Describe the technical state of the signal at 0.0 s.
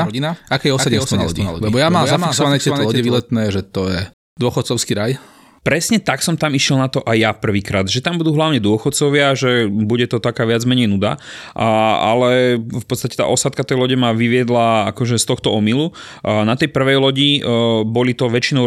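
At 0.0 s the speech already carries a doubled audio track. A dry, full-band copy trails about a third of a second behind at a somewhat lower level and cuts off abruptly at 3.2 s, just before "že to". It is likely a second, slower capture path mixed in.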